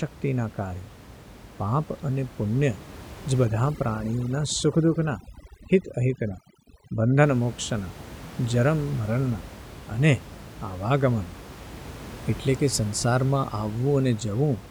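From 3.45 to 7.23 s the background drops and breaks up into twinkling specks. This is overdone noise removal: an over-aggressive reduction stage mutes bands near its noise estimate, swallowing the room noise (about 17 dB below the speech) and quiet speech detail alike.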